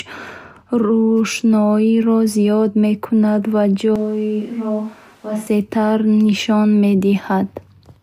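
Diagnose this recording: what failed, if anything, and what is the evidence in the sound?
From 3.96 s to 5.47 s the speech abruptly turns roomy and hollow, drops about 5 dB in level and loses low end, then snaps back just as suddenly. This sounds like a switch to a distant microphone at the capture stage, with the close microphone's feed likely lost and a farther pickup filling in. On a spectrogram the section shows thinned bass, smeared reverberant tails and a raised noise floor roughly 30 dB below the speech. On the waveform it appears as a lower-amplitude block with hard edges at both boundaries.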